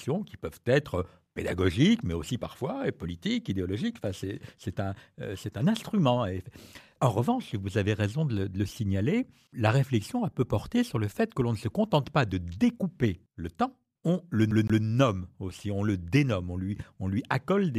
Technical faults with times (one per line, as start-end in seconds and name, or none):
14.51-14.84 CD stuck on one turn